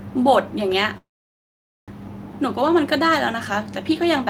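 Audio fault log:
0.97–1.91 s, call audio freeze: the sound smears into a brief fading buzz, then about 0.85 s of silence before resuming intact, about 0.9 s late. Likely a stalled jitter buffer. The spectrogram shows a short tail, then an empty band; the waveform shows a flat line.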